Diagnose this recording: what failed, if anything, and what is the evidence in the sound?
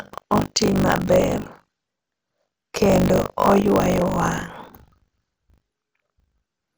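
Buffer tearing throughout, at the driver or buffer stage: a robotic 50 Hz buzz rides on the speech as about a fifth of each buffer replays audio roughly 40 ms old.

MP2 compression throughout, at the codec stage: dull, gurgling speech with its upper bands switched off, likely from MPEG Layer II, fitting a rate near 64 kbps.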